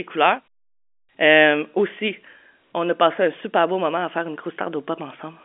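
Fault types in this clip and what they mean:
Nothing faulty can be heard in this speech recording.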